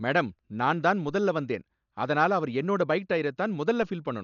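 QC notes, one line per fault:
Throughout, Dolby Digital compression, likely. The speech sounds dull, with nothing above 6.9 kHz. Rough, fluttering noise surrounds tonal sounds. Damage this heavy fits a bitrate near 48 kbps. Many frequency lines get no mantissa bits and are filled with noise.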